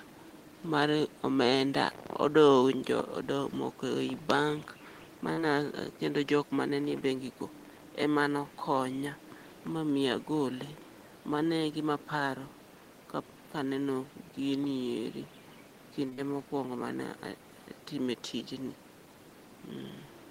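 A brief smear passes through the speech at 5.33 to 5.39 s, a short stretch where the sound seems to hang on and waver before settling back. This is short concealed packet loss: about 40 ms of audio never reached the decoder in time, and the receiver covered the gap by extending the preceding sound for roughly 37 ms, following its pitch or its noise character, before blending into the real signal again.

At 16.09 to 16.13 s a sound is held slightly too long, a small drawn-out moment with nothing actually lost. That is a short stall from a late packet. The jitter buffer ran dry, so the receiver stretched the last sound for about 23 ms until the packet arrived, then carried on from the same point, adding that much delay.

Right after it, at 16.13 to 16.20 s, a second short concealed packet loss follows. Another 40 ms went missing and roughly 41 ms of continued sound stands in for it, following straight on from the stall.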